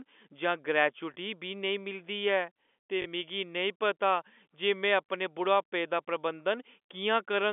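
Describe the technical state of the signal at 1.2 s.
Right around there, just before 1.2 s at about 1.14 s, there's a single case of packet loss with the last packet repeated. One 20 ms packet went missing, and the receiver filled the gap by replaying the previous one. It's a brief, small blip, too short to build into a buzz.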